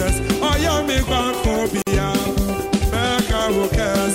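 At 1.82 s the sound drops out for 50 ms, then resumes: a gap at a join of encoded pieces, from untrimmed encoder delay and padding.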